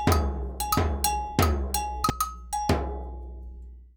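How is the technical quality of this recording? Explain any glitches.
The recording has one clear glitch: a doubled audio track. From the start until 2.1 s, the sound is already doubled. A full-band second copy trails the original by roughly 0.7 s, about 5 dB quieter. It has no decay or room colour. It likely comes from a slower second capture path mixing the same audio back in. At 2.1 s the copy cuts off abruptly.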